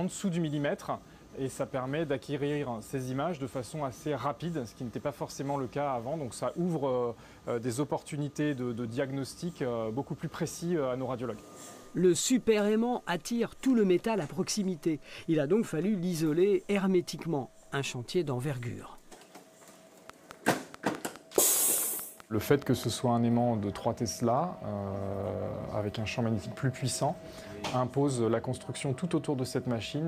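A train of clicks runs from 20.10 to 22.85 s, about 4.7 clicks per second at regular spacing, likely interference injecting pulses that stand out over the sound.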